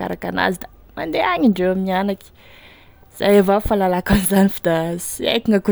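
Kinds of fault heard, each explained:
Mains hum: a steady low 50 Hz tone sits well beneath the speech from the start until about 2.11 s, the power line leaking in through a ground loop or nearby transformer.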